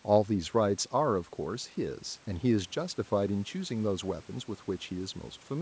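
No technical faults are audible.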